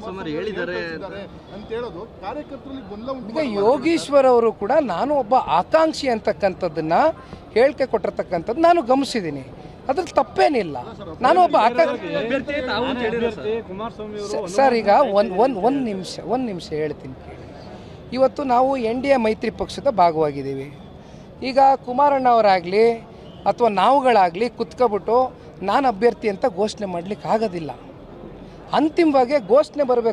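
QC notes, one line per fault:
Nothing to flag here; I listened all the way along and found no problems worth noting.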